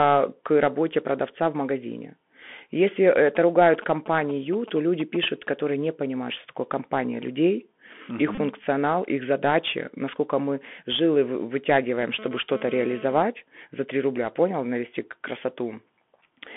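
Throughout the clip the speech has passed through the Bluetooth CVSD headset codec, which sends one bit per sample at 64 kHz to say whether the waveform steps up or down, with an adapting step size. The damage is plainly audible: the band runs only from about 200 Hz to 3.4 kHz, sibilants sound scratchy, and a granular hiss sits beneath the speech. On a spectrogram the energy stops at a hard ceiling near 3.4 kHz, with a speckled noise floor between syllables.

From 3.27 to 5.49 s, ending just before "не понимают что такое", GSM signalling bursts break in. A nearby 2G phone is sending short groups of radio bursts, and the audio circuitry rectifies them. The result is a galloping dit-dit-dit of brief 217 Hz buzzes, roughly 15 dB below the speech. A spectrogram shows clustered vertical stripes with harmonic ladders spaced 217 Hz apart. The waveform shows bursts of spiky pulses separated by gaps.

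At 8.35 s, right after "угу их", a Bluetooth headset packet is repeated. Voice packets were lost and the chip decoded the last good packet's bits again. The gap lasts about 32 ms, and the 22.5 ms of lost audio fits six consecutive 3.75 ms packets. The repetition every 3.75 ms gives a short buzz near 267 Hz. On the waveform it appears as a short run of identical copied cycles, and the spectrogram shows a brief band of harmonics spaced 267 Hz apart.

From 12.01 to 13.23 s a GSM phone buzz is present, caused by a nearby phone transmitting during a data transfer at 217 bursts per second. Rectification of those radio pulses produces a hard, raspy 217 Hz buzz with many harmonics, about 16 dB below the speech and unrelated to it. On a spectrogram it forms a dense comb of horizontal lines at 217 Hz multiples that starts and stops abruptly. The waveform shows a regular pulse train riding on the speech.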